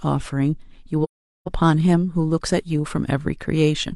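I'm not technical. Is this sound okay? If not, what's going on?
No. From 1.03 to 1.48 seconds the speech drops out completely, a gap of about 0.43 seconds. This is AAC frame loss with muting. The audio is sent in small compressed chunks, and a run of them went missing, which fits about ten lost chunks. With nothing to play, the decoder filled the gap with silence. It overlaps neighbouring chunks, so the sound fades out into the gap and back in after it.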